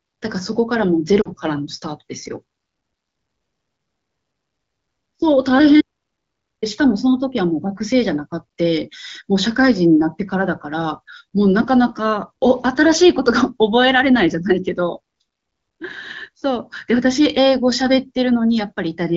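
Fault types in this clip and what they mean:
lost AMR speech frames: around 1.21 s a 40 ms stretch, consistent with two lost frames, fades toward near silence; the spectrogram shows frozen harmonics dimming briefly.
audio dropout to silence: from 5.81 to 6.62 s the sound cuts to total silence, with a blank spectrogram, likely from lost input.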